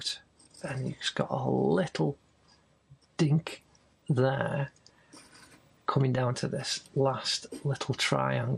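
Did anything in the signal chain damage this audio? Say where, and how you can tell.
Yes: MP2 compression throughout, likely from a Layer II codec at a low rate around 80 kbps, leaving dull, flickering upper bands and gurgling, granular quantisation distortion.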